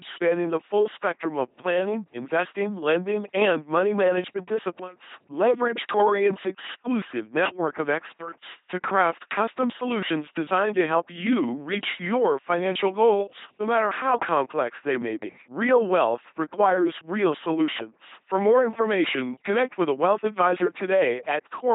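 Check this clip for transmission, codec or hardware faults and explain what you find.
The speech runs through an LPC-10 vocoder for its full length, with heavy damage.

LPC-10 vocoder, throughout: each frame drives a ten-pole vocal tract filter with either a buzz pulse train or noise, never a mix. The speech becomes a mechanical robot voice with misjudged buzz or hiss, at a rate that fits 2.4 kbit/s. A spectrogram shows rigid comb-like harmonics, abrupt switches to flat noise, and nothing above 3.8 kHz.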